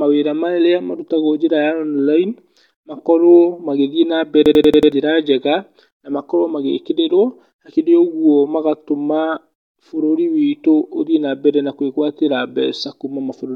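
From 4.46 to 4.92 s the speech locks into a system hang loop: the machine stalled while the audio hardware kept replaying its ring buffer, so one 93 ms slice repeats five times at 10.8 Hz, a machine-gun stutter that fits a 4096-sample buffer. Unlike packet-loss concealment or a dropout, each repeat is an exact copy rather than a smeared or silent gap. About half a second of speech is lost before "njega na makorwo magĩkĩrĩrwo" resumes.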